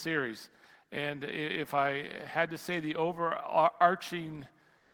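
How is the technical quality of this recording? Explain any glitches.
One glitch stands out, right at the close of the recording. From 4.78 s to 4.94 s, the last 156 ms or so, the background is replaced by comfort noise. The real room sound, sitting about 44 dB below the loudest parts, gives way to a steady, featureless hiss whose level is about 4 dB different. The likely cause is Opus discontinuous transmission: the sender stopped sending audio during the pause, and the receiver synthesised shaped noise to fill it. On a spectrogram this appears as a smooth, uniform band with no fine detail. On the waveform it is an even, low-level trace.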